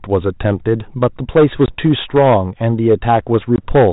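Hard clipping runs through the whole speech clip. The signal is driven about 8 dB past what the chain can pass. A small share of samples reach the ceiling and are cut flat. Loud syllables crackle with a harsh, buzzy edge.

At 1.66 s and again at 3.56 s there is packet loss on an ADPCM call, here a 32 kbit/s G.726 link. Each time 20 ms drops to hard-edged silence, which fits one lost packet. The decoder's prediction falls out of step with the sender's. Speech comes back with brief distortion. It settles by 1.75 s and 3.66 s.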